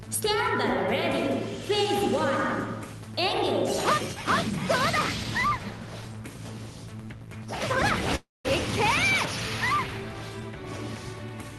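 From 8.15 s to 8.46 s the sound breaks off. The last moment before the gap is drawn out into a buzzing or hissing tail that fades, about 190 ms of near silence follows, and the audio resumes with 300 ms of material gone. This is likely a long network dropout, with the receiver covering the gap before giving up. On a spectrogram, the final frame smears into a blurred, decaying band and then a dark, empty column. The waveform shrinks to a flat line before resuming partway on. Throughout, the call path leaves no energy above 12 kHz, which fits Opus at around 32 kbps.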